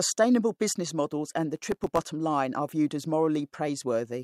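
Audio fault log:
1.56–2.06 s processor overload crackle: the processor misses deadlines for very short buffers, leaving dozens of tiny hard-edged silent gaps that tear the speech into gritty crackle.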